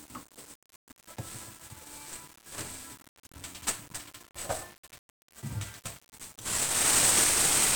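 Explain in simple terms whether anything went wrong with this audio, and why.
Throughout the whole clip, the sound is fuzzy and crackly, with hiss covering the treble. That is 1-bit DFPWM compression, which squeezes each moment into a single up-or-down step.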